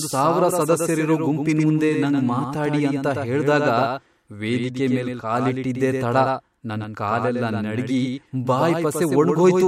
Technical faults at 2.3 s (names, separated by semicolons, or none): doubled audio track